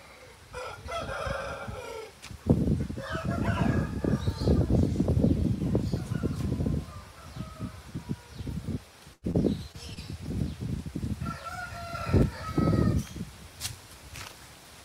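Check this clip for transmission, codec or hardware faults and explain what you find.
Packet-loss faults cluster in one second of the clip, around 9 to 10 seconds.

A burst of packet loss at 9.13–9.25 s drops about 100 ms. The receiver extends the last sound into a fading buzz or hiss, ending in about 30 ms of silence. On a spectrogram this appears as smeared, decaying bands and then a blank gap.

Short concealed packet loss hits at 9.31–9.36, 9.72–9.76 and 9.94–9.98 s, each losing 20 ms. Brief synthesized fill makes a smear or wobble, visible as slightly blurred slivers in the waveform.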